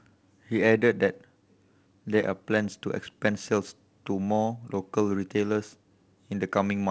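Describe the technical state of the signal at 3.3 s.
At 3.3 s the speech carries no fault, with only the light coding character of G.722 wideband telephone coding at 56 kbit/s present.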